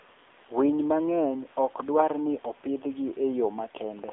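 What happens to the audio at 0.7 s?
At 0.7 s the speech sounds thin, boxy and buzzy, with a synthetic edge. The fault runs through the whole clip. It is the AMR narrowband mobile codec: the line keeps only about 300 Hz to 3.6 kHz, so the upper range that gives speech its air and crispness is gone. The codec rebuilds each 20 ms frame from a vocal-tract model excited by a few pulses. The plainly audible buzz fits a low bitrate around 7.4 kbps.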